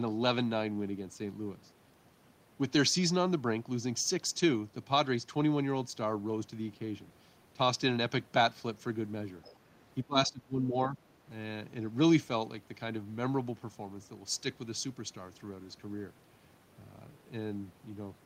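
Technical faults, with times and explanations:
9.42–9.56 s, other side's voice leaking through: a faint second voice briefly surfaces, roughly 25 dB below the speech. Residual loudspeaker echo the canceller likely missed.
10.04–10.98 s, speech suppressed in double talk: the voice dips about 20 dB, in pieces totalling around 0.7 s. Both sides likely spoke at once, so the canceller turned both down.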